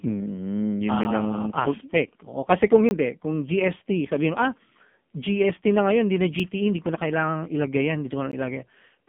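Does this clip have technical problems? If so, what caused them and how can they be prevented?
Yes. The speech sounds buzzy, thin and synthetic throughout, with nothing above about 3.5 kHz and the lows rolled off, as on a 150 to 3400 Hz phone line. This is the AMR narrowband mobile codec at heavy damage: it rebuilds the voice from a sparse vocal-tract model, and the harsh buzz points to a very low mode around 5.9 kbps. To prevent it, record or transmit with a wideband codec at a higher bitrate instead of a narrowband mobile path.

Short clicks and tiny holes occur at 1.04 s, from 2.89 to 2.91 s, at 6.40 s just before "hindi ko na kailangang", and at 8.32 s. Each is a block of digital silence lasting 4 to 20 ms. Samples were replaced by zeros, and the sound cuts out and back with no fade. To prevent it, use larger audio buffers and keep the processing thread fast enough that the output is always filled on time.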